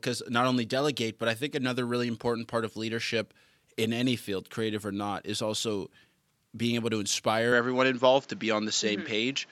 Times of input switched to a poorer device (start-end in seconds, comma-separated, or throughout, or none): 7.52-9.52